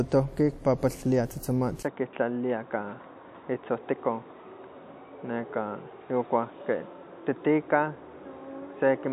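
An input switched to a poorer device is the likely cause of the change at 1.83 s, which lasts to the end. A brief gap of about 20 ms marks the switch. From there the speech has nothing above 3.8 kHz and so sounds duller and boxier. The level drops by about 5 dB, and a new noise floor sits about 50 dB below the signal. This is the narrower band, tone and noise of a different, lesser capture path.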